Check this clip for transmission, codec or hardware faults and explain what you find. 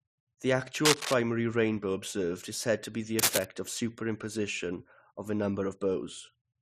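Cable scratch noise appears twice in this speech. From 0.85 to 1.14 s, just before "rainbow observed is said", and from 3.19 to 3.45 s, right after "said to be the", dense, ragged rustling sits over the signal, about as loud as the speech the first time and somewhat louder the second. The likely cause is a worn cable or connector being moved, its contact resistance fluctuating rapidly. Unlike a single click or a clean dropout, each burst is a sustained, uneven scratchy texture lasting roughly a quarter of a second.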